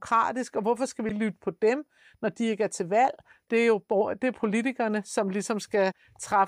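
At 1.09 s, 3.44 s and from 5.90 to 5.92 s the speech is broken by short bursts of damaged data in a compressed stream. Each is a brief chirp or blip, lasting around 20 ms or less, where corrupted bytes in the encoded file made the decoder misread the affected frame, lose synchronisation and hunt for the next valid frame header before normal playback resumed.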